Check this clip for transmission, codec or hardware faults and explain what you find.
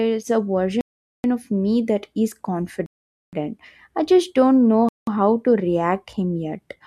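There are three dropouts in the speech, and they look like a Bluetooth stall. At 0.81 to 1.24 s, 2.86 to 3.33 s and 4.89 to 5.07 s the sound cuts to silence for 0.43 s, 0.47 s and 0.19 s, then carries on. The likely cause is interference holding up packets, so the headphones' buffer empties and playback waits for the resends.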